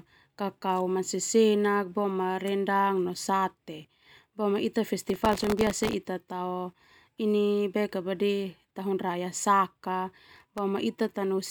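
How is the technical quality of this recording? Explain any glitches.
The recording has two bursts of processor overload crackle. The first runs from 5.09 to 5.93 s, the second from 10.36 to 10.58 s. The processor could not finish its very short audio buffers on time, and many deadlines were missed in a row. Each miss replayed a sliver of old audio with hard edges. The result is a gritty, tearing crackle riding on the speech. It stops when the load eases.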